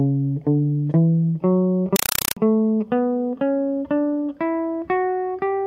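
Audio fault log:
1.96–2.37 s, compressed stream played as audio: the music is replaced by harsh, very loud chattering static. The link handed over a Dolby Digital (AC-3) bitstream, and it was played as ordinary samples instead of being decoded. Each frame of data comes out as a 4.0 ms burst of noise, then silence from the zero padding. The bursts repeat 31.25 times a second, which gives the rapid chatter. The sound fits a 192 kbps stream.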